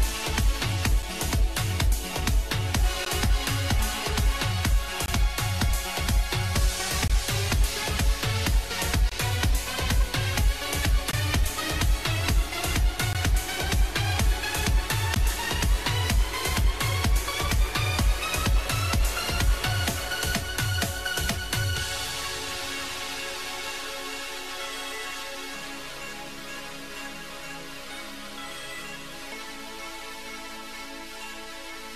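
Short silent holes with hard edges break the sound at 1.02, 3.05, 5.06–5.08, 7.08–7.10, 9.09–9.12, 11.11–11.13, 13.13 and 15.14 s. Each is a gap between stream segments, 5 to 22 ms long and recurring every 2 s, where segment timestamps misalign. Unlike a dropout, nothing is lost; the sound resumes exactly where it stopped.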